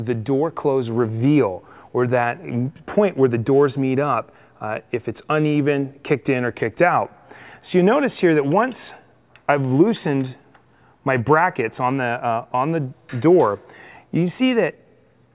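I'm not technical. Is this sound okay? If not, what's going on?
Yes, no faults can be heard.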